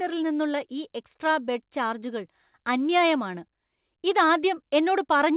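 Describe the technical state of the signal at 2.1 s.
At 2.1 s the speech is intact, with no dropout, glitch or distortion, only the steady narrowband sound of the G.711 A-law call path, which carries nothing above 4 kHz.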